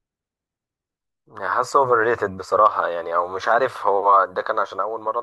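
No technical faults can be heard anywhere here.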